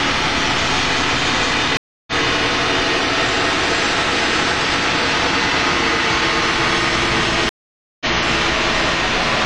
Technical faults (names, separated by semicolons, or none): stream reconnect